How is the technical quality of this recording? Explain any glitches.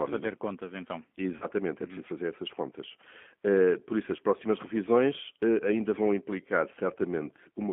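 The recording has plainly audible low-bitrate codec damage throughout and one brief dropout in the speech.

G.729 codec (throughout): The speech is coded with the 8 kbit/s G.729A codec over a telephone band of 200 Hz to 3.4 kHz. The codec models each 10 ms frame with a vocal tract filter, a pitch predictor and a few pulses, so the result is intelligible but rough and synthetic. On a spectrogram, energy stops at a hard ceiling near 3.4 kHz, with a thin floor below 200 Hz.

VoIP packet loss concealed by the speech codec (1.37 to 1.45 s): About 40 ms of audio went missing, which fits two lost 20 ms packets. The decoder filled the gap by extrapolating from its last pitch and filter settings while stepping the gain down, which produces a stretched buzzy tone or coloured noise that fades. Because each frame depends on the previous one, the disturbance lasts past the gap until about 1.45 s. In the waveform, the envelope sags there. 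On a spectrogram, the harmonics freeze briefly instead of moving.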